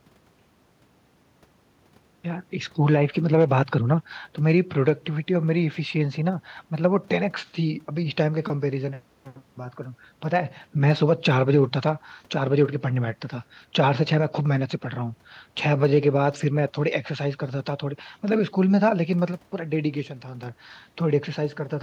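A speech recording with no audible technical faults anywhere in the signal.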